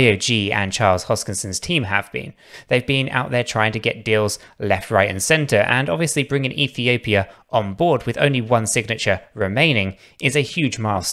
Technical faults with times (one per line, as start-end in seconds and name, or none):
none